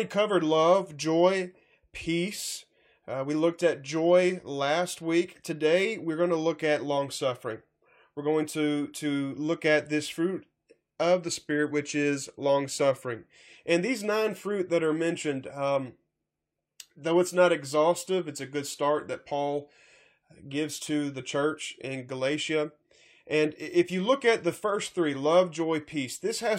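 Nothing in the recording trips any alarms: the speech runs along without a single technical fault to point out.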